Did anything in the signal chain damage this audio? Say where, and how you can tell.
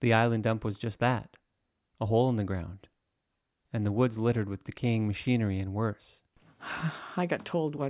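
No, nothing along the chain seems to have damaged this speech recording; every stage from capture to playback left it alone.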